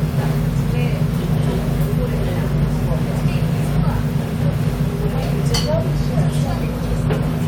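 No technical faults are audible.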